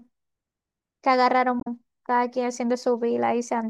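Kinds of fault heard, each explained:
Damaged data in a compressed stream: around 1.60 to 1.67 s the speech breaks into a brief glitch lasting under a tenth of a second, as the decoder hits corrupted bytes, misreads a frame, loses sync and resumes at the next valid frame header. Its cause in the decoder's misread frames and lost sync sets it apart from a plain dropout, which is simply missing audio.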